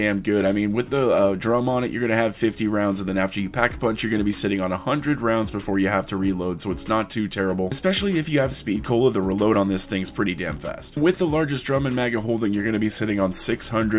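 No technical faults are audible.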